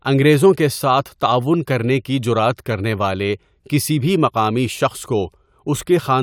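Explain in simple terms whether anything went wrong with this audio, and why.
Nothing went wrong with the recording here: the speech comes across steady and intact, with no glitches, gaps or odd noises anywhere along the way.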